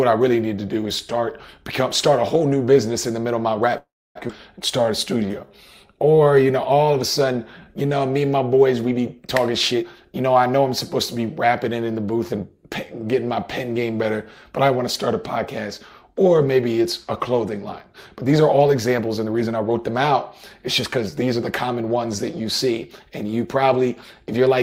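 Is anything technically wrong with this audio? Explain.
Yes. At 3.77 s the audio freezes for about 0.4 s, like a call audio freeze. The last sound is stretched into a fading tail, then silence for 280 ms. This is likely packets held up until the buffer ran dry.

At 4.27 s it skips ahead. Roughly 0.3 s of audio is dropped, and the two sides are joined almost directly, with only a tiny fill.

From 4.81 to 7.89 s a jitter buffer slow-down plays at 91% speed. Repeated pitch periods add 297 ms, drawing sounds out at unchanged pitch.

Jitter buffer speed-up follows three times: 9.38 to 10.36 s at 115%, 17.93 to 20.09 s at 107%, and 20.66 to 21.89 s at 104%. Short pieces are cut to shed built-up delay, so the audio runs faster at the same pitch.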